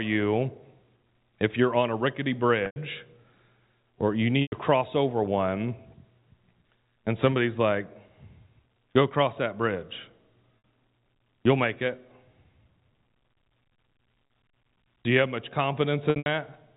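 Packet loss with pitch repetition at 2.66, 4.42, 10.59, 14.26 and 16.1–16.26 s: the last pitch period repeats, giving brief held buzzes, with the longer gaps fading into silence.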